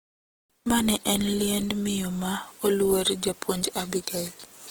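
Throughout, the speech sounds grainy and rough from Opus compression, likely near 16 kbps; the spectrogram shows noise-filled bands, with few holes, up to 20.2 kHz.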